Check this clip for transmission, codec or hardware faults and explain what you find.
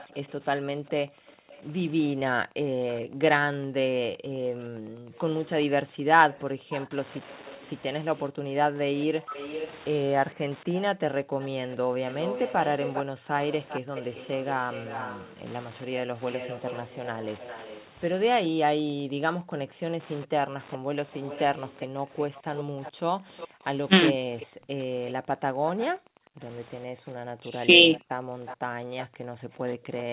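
Four kinds of fault are audible in the speech: Wi-Fi interference, an echo leak, background gated by the echo canceller, and speech suppressed in double talk. The top end stops at about 4 kHz throughout, which fits a narrowband telephone codec and is not itself a fault.

Wi-Fi interference runs through the whole clip as a faint, steady ticking, roughly ten clicks a second, sitting around 30 dB below the speech. The spacing is 102.4 ms, the interval at which a Wi-Fi access point sends its beacons. A radio near the audio circuitry puts out those bursts, and the circuit rectifies them into audible pulses. That is why the ticking is so evenly spaced.

The echo leak is a faint delayed copy of the speech, trailing about 400 ms behind and roughly 20 dB quieter, from the start until 29.07 s. The likely cause is a far end playing the call on a loudspeaker whose echo canceller did not fully remove what its microphone picked up. 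The residue was sent back down the line, where it surfaces as this lagging shadow.

Background gated by the echo canceller appears as the room sound abruptly sinking and then returning, in two stretches: 0.11 to 13.93 s, where the dips add up to around four seconds, and 18.49 s to the end. At its deepest the ambience falls by about 40 dB, close to silence. While the loudspeaker was playing, the canceller clamped the microphone hard to keep echo out, and it took the background down with it.

Speech suppressed in double talk shows up as short dips in the talker's own voice. The first is at 9.27 to 9.34 s, where the level falls by around 20 dB. Two shallower dips of around 10 dB follow, at 24.13 to 24.18 s and at 27.42 to 27.67 s. These most likely happened when both sides spoke at once. The canceller could not separate the talker from the loudspeaker echo, so it turned both down briefly.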